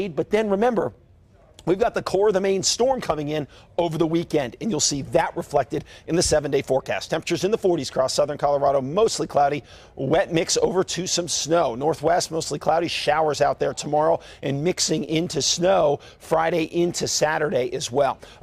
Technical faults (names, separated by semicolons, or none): none